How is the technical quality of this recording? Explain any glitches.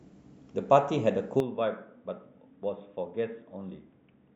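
The recording starts clean but degrades abruptly at 1.40 s and stays degraded to the end. From that point the speech turns dull and boxy, drops by roughly 10 dB in level, and picks up a faint new background noise well below the speech. This is likely an input switched to a poorer device, such as another microphone or a headset's call profile, with no gap at the switch. That device passes nothing above 3.8 kHz. On a spectrogram the upper band is cut off flat at 1.40 s, and the waveform visibly shrinks there.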